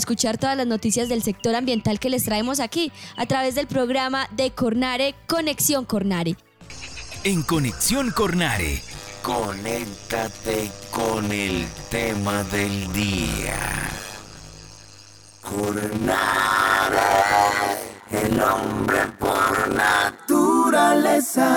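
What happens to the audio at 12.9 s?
At 12.9 s the audio is inside a block size mismatch (padded) running from 8.94 to 20.19 s. Each block is only partly filled and the remainder zero-padded, producing a 100 Hz buzz and playback at 0.533 times normal speed with pitch roughly unchanged, which fits 256-sample writes into 480-sample reads.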